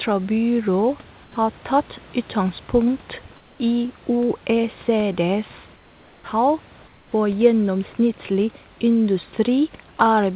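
At 1.24–1.36 s, 3.36–3.6 s just after "tatt utgangspunkt", 5.76–6.24 s and 6.88–7.12 s just before "for gjennomsnittlig", comfort noise in place of the background appears. The pauses turn flat and featureless, about 3 to 5 dB quieter, likely because discontinuous transmission stopped sending and the receiver synthesised noise. On a spectrogram these are smooth, uniform patches within the band, which ends at 4 kHz on this call path. At 6.22–6.24 s comes an onset clipped by the voice detector. The sound starts abruptly, its first 20 ms likely lost to a slow detector, and the waveform jumps straight from noise to full level.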